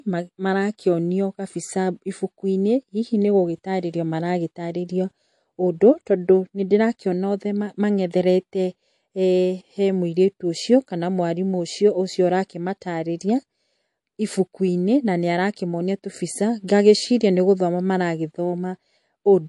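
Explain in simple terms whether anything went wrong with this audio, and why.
Something did go wrong, and it runs through the whole recording. The speech has a watery, swirly quality, and there's nothing at all above about 11.3 kHz, so the crisp top end of s sounds is gone. That's likely MP3 compression squeezed hard: the encoder ran short of bits, chopped off the treble at a fixed point, and dropped quieter detail that flickers in and out, which causes that underwater shimmer.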